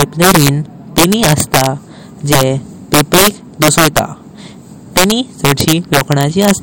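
Integer overflow runs through the whole speech clip. The signal has been pushed about 5 dB past the top of the integer range, and instead of being limited, each peak that crosses the ceiling wraps around to the opposite extreme. Only a small share of samples, on the order of one or two percent, go over, but every one produces a full-scale jump. The result is sharp, violent cracks on the loudest syllables, far harsher than ordinary clipping.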